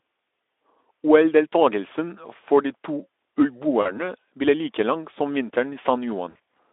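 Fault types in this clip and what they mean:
VoIP packet loss concealed by the speech codec: Speech packets went missing twice, and the decoder filled each gap by extending its last pitch and spectral shape at falling gain. About 40 ms near 3.81 s and scattered gaps between 6.29 and 6.54 s turn buzzy or noisy, smeared and briefly weak.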